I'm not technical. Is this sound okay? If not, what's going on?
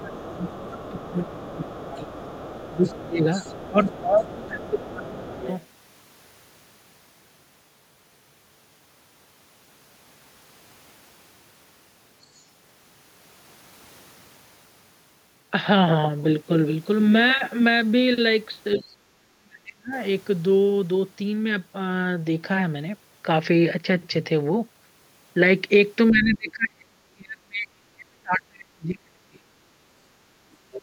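No. When both people on the call talked at once, the echo canceller likely couldn't tell the talker apart from the returning loudspeaker sound, so it turned everything down. This is speech suppressed in double talk: the voice dips or drops out from 0.0 to 5.47 s, 18.76 to 19.93 s, 26.1 to 29.45 s, and 30.68 s to the end.

The talker's device plays the other person through a speaker, and the echo canceller likely missed part of that sound as it reached the microphone. The result is the other side's voice leaking through: a faint second voice under the talker from 0.0 to 5.66 s, with brief scraps at 12.35 to 12.44 s and 18.72 to 18.79 s.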